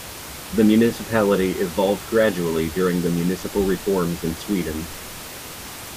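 Nothing stood out on listening to the speech, beyond the room's background noise sitting about 15 dB below it as part of the recording.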